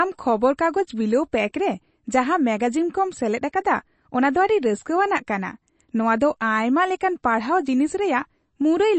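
Throughout the speech, the sound is dull and plainly watery, with nothing heard above about 8.3 kHz and a swirly, metallic edge on sibilants where faint detail flickers in and out. This is likely MP3 compression at a low bitrate, consistent with roughly 32 kbps, cutting the treble and discarding weak spectral lines.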